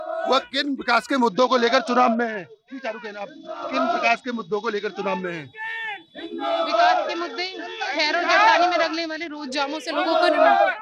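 From 1.28 to 5.22 s and again from 6.69 to 9.77 s, a Bluetooth SBC bit pool drop starves the upper sub-bands and coarsens the rest. Treble dulls and gritty noise rises, consistent with the bit pool falling from 28 to 8, near 72 kbps.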